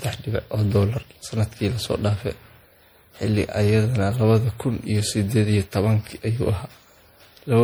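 A speech clip showing generation loss from start to finish. The sound is swirly and hollow, with smeared consonant attacks and a watery, phasey texture in the upper range that is heavier than a single low-rate encode would leave. The likely cause is about five successive decode and re-encode passes through an MP3 codec, which fits a 64 kbit/s setting; each pass requantises on a shifted frame grid, so the noise and spectral holes accumulate.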